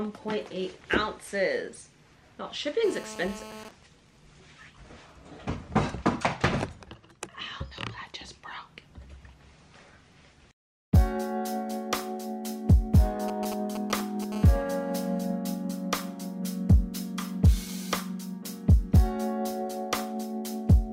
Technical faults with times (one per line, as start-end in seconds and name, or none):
2.84-3.64 GSM phone buzz
3.65-6.35 GSM signalling bursts
13.28-14.24 GSM signalling bursts
14.32-15.24 GSM phone buzz